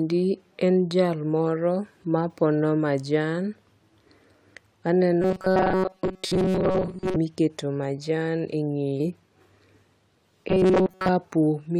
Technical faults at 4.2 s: none

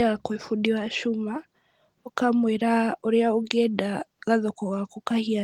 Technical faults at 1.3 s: none

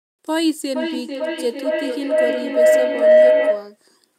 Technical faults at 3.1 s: feedback howl

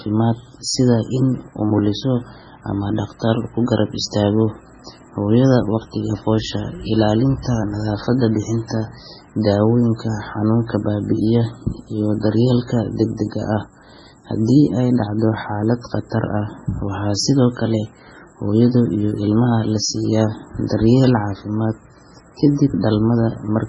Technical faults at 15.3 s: MP3 compression

